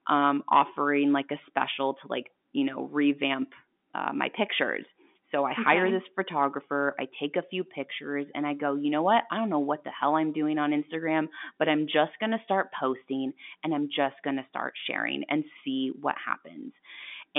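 No technical faults can be heard in this speech.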